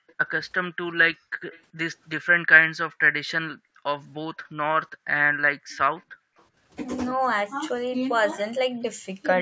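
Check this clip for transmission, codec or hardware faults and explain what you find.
Two related faults appear, both from the far end's loudspeaker and echo canceller on a speech call, with band-limiting at 8 kHz from the call's normal microphone processing.

Background gated by the echo canceller occurs at 0.00–0.08, 1.18–1.42, 2.89–3.01, 3.56–3.84 and 4.37–6.37 s. The canceller clamps the microphone while the loudspeaker plays, so room sound falls by up to about 40 dB. On a spectrogram the noise floor blanks out, and the waveform shows sudden flat gaps.

An echo leak is heard at 0.08–0.27, 1.51–1.62 and 5.77–6.44 s as a faint copy of the speech trailing by about 385 ms, roughly 30 to 35 dB down. It is likely residual echo the canceller failed to remove. A spectrogram shows weak, smeared replicas of earlier speech patterns.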